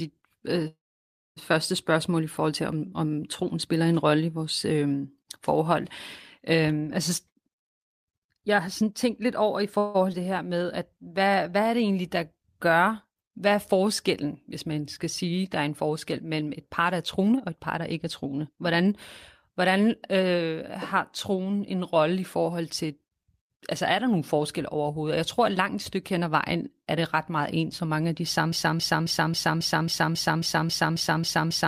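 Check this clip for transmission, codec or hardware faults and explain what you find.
The speech has several network-delivery faults, plus a repeating loop at the end.

Call audio freeze, 0.67–1.38 s and 9.78–9.96 s: delayed packets likely emptied the jitter buffer. The first inserts 0.69 s, mostly silent. The second adds 0.16 s of fading fill. Both resume without loss.

Jitter buffer speed-up, 7.10–9.61 s and 16.80–18.88 s: surplus buffered audio was trimmed by cutting pitch periods. About half a second goes at 123% speed, then about 0.3 s at 112%, sounding hurried at unchanged pitch.

Skip ahead, 10.12–10.15 s: roughly 100 ms of speech was dropped while later audio waited, so playback jumps forward almost seamlessly.

Jitter buffer slow-down, 10.48–11.51 s: repeated pitch periods add 112 ms to rebuild the buffer, playing at 90% speed with drawn-out sounds.

Broken-record loop, 28.52 s to the end: a stall likely kept resending one 0.27 s fragment, which repeats back to back and replaces the remaining audio.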